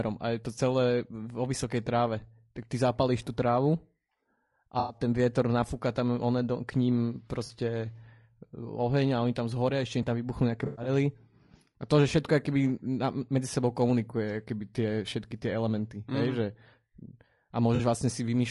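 Low-delay AAC compression runs through the whole speech clip and is plainly audible. Voices come across rough and grainy, with noise filling the gaps between harmonics and a thin, synthetic-sounding top band. This is likely AAC-ELD, the low-delay codec used for video calls, at a bitrate that fits about 32 kbps. Its very short frames cannot separate pitch harmonics cleanly, and the limited bits leave audible damage.

AAC frame loss with concealment occurs four times. From 4.79 to 4.98 s a 100 ms stretch is missing. From 7.45 to 7.51 s, 40 ms drops out. From 10.65 to 10.89 s the losses total 140 ms, scattered over 200 ms, with the longest run about a tenth of a second. From 17.75 to 17.81 s another 40 ms goes. Each time, the decoder rebuilds the gap from the last good spectrum, and the patches sound smeared, noisy or phasey.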